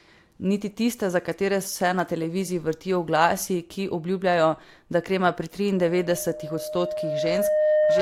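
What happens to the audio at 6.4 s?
A loudspeaker feedback squeal, from 5.77 s (after "obljubljajo da krema pri") to 8.01 s: the microphone re-amplifies its own loudspeaker until a 612 Hz tone swells over roughly two seconds to about 5 dB above the speech. A spectrogram shows one brightening horizontal line there.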